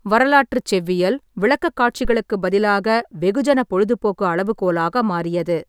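At 2.05 s a phantom power thump hits the speech. Supply voltage was switched on a live input. That step passed through the coupling capacitors. It sounds like a deep low thud, peaking near about -13 dBFS. It decays within about 28 ms, ending by 2.17 s.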